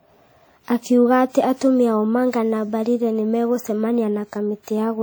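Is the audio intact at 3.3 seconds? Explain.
No. At 3.3 seconds the speech carries the same damage heard throughout the clip. It sounds ringing and washy, with hiss that swells and fades with the signal. This is likely WMA compression, consistent with about 48 kbps. Its long transform blocks smear quantisation noise over tens of milliseconds and zero out weak detail.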